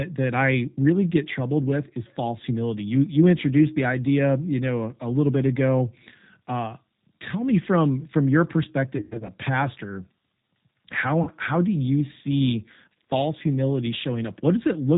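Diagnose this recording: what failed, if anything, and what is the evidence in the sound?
The codec stage is at fault: the whole recording passed through the G.729 codec at 8 kbit/s, and the damage is plainly audible. Nothing above 4 kHz survives, and the speech sounds rough and synthetic because it is rebuilt from a vocal tract filter, pitch prediction and sparse pulses.

At the network stage, VoIP packet loss was concealed by the speech codec. From 8.97 to 9.31 s, just after "me from from your", about 180 ms went missing across a 320 ms stretch, with the longest gap 100 ms. From 11.23 to 11.30 s, before "how do you see", 40 ms was lost. Each time the decoder extended its last pitch and filter at falling gain, producing a buzzy tone or coloured noise that fades, and weakened speech until it recovered.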